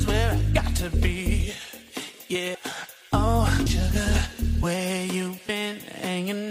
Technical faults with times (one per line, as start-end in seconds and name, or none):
2.54 compressed frames skipped
3.66 compressed frames skipped